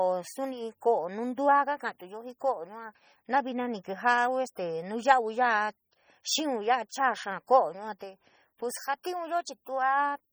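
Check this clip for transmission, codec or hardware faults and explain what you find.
One codec fault runs through the whole recording. The speech sounds watery and swirly from start to finish, with a heavy, metallic chirping on sibilants and attacks that smear rather than snap. The likely cause is MP3 compression at a low rate, which fits a bitrate around 32 kbps. Starved of bits, the encoder zeroes weak frequency lines, which flicker on and off between frames and produce the swirling. Content stops at about 20.9 kHz.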